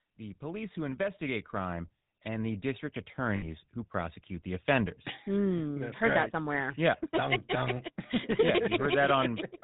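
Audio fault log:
Throughout: GSM full-rate codec. The speech carries a buzzy, gravelly roughness because the vocal tract is modelled and driven by a regular pulse train built from only every third excitation sample, and the plainly audible damage fits a rate around 13 kbps. On a spectrogram, nothing appears above 4 kHz, with a hard ceiling across the whole clip, and the harmonics below it look smeared and grainy rather than cleanly striated.
0.05 to 4.22 s: automatic gain rising. The level climbs steadily by about 12 dB over roughly four seconds, ending just before "the offenders", as the gain control judged the input too quiet and kept turning it up. Speech and background noise swell together, so the noise floor rises in step. The waveform envelope widens gradually from left to right, and on a spectrogram both the speech and the gaps between phrases grow brighter.
3.36 to 3.45 s: lost GSM frames. 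About 60 ms of audio went missing, which fits three consecutive 20 ms frames. Each gap was filled by reusing the parameters of the last good frame, so the sound hangs on as a short, rough, metallic ring instead of continuing normally. A spectrogram shows a frozen, repeated spectral pattern, and the waveform shows a brief stretch of repetitive cycles.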